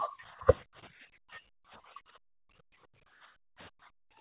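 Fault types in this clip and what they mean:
Speech suppressed in double talk: the speech briefly dips or breaks up, likely from the echo canceller clamping overlapping talk, showing as sudden waveform notches and thinned spectrogram bands.
Background gated by the echo canceller: the room sound is pushed down about 25 dB, then about 40 dB for 1.5 s, flattening the waveform floor and blanking the spectrogram.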